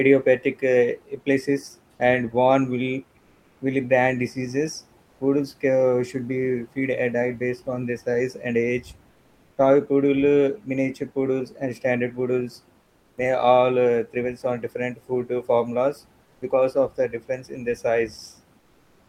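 In the pauses at 3.19 to 3.59 s, 5.03 to 5.19 s, 12.81 to 13.17 s, 16.23 to 16.41 s and 18.59 to 19.08 s, the room noise, sitting about 40 dB below the speech, turns into a flat, featureless hiss about 1 to 5 dB quieter. This is comfort noise in place of the background, likely from discontinuous transmission: the sender stops sending when no speech is detected, and the receiver fills the gap with synthetic noise, a pattern that points to Opus DTX.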